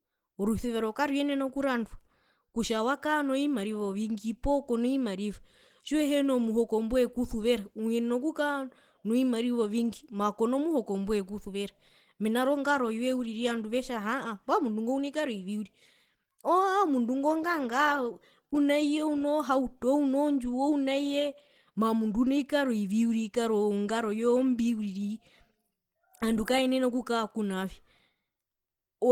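Opus compression runs through the whole speech clip as plainly audible codec damage. The sound is muffled, hoarse and grainy, though content still reaches about 20.2 kHz. This likely comes from Opus's hybrid mode at a rate that fits 16 kbps, which codes the lower band as speech and fills the upper bands coarsely.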